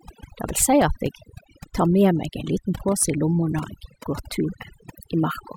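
From the first moment to the end, the speech carries overdone noise removal: a noise reducer pushed too hard has pulled individual frequency bands down to nothing wherever they sat close to its noise estimate, taking the softer parts of the voice with them. Pauses drop to near silence flecked with twinkling specks. Unlike a noise gate, which mutes everything at once, this removal works band by band, leaving those scattered specks behind.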